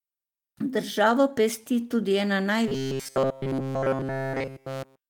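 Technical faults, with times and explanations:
2.68–5.09 s, robotic sound from repeated short buffers: after "pesti tudi ena", new audio likely arrived too seldom and a roughly 7.5 ms slice looped continuously, locking the speech into a rigid metallic buzz at 134 Hz.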